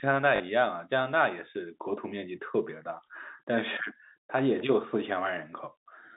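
At 0.36 to 0.40 s, packet loss with the last packet repeated fills a 40 ms gap, which fits two 20 ms packets. It sounds like a brief robotic stutter.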